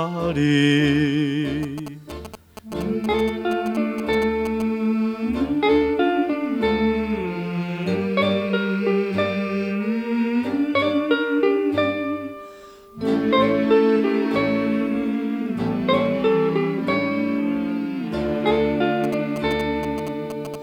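GSM signalling bursts appear from 1.63 to 4.62 s and again from 19.04 to 20.56 s: a galloping dit-dit-dit of short buzzes at about 217 Hz, roughly 10 dB below the audio, as a nearby 2G phone signals and the circuit rectifies its radio bursts.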